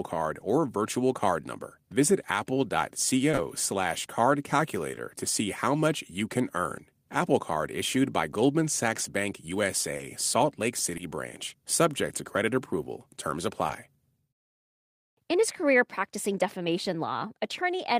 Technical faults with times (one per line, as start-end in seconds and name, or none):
3.31-3.39 short concealed packet loss
4.91-4.99 short concealed packet loss
9.97-10.01 short concealed packet loss
10.97-11.01 short concealed packet loss
13.67-13.71 short concealed packet loss